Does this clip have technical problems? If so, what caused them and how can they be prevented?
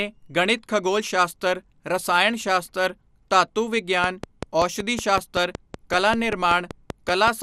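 Yes. Throughout the speech the sound is dull and lacks top end, with a gurgling, granular roughness in the upper range and bands that flicker in and out. This is most likely MP2 compression at a low rate, around 80 kbps judging by the damage. MPEG Layer II splits the audio into 32 sub-bands and, when short of bits, switches off the upper ones and quantises the rest coarsely. Encoding at a higher bitrate, or with a more efficient codec, would prevent it.

From 4.04 s to 7.29 s a train of clicks ticks over the speech at a steady 5.25 per second, about twenty sharp, similar pops in all, peaking at roughly 15 dB above the speech and audible in the gaps too. The regular, near-identical pulses point to a likely source in electrical interference from nearby equipment or a faulty connection or power supply. Shielding or moving cables away from other devices and checking connections and the power supply would prevent it.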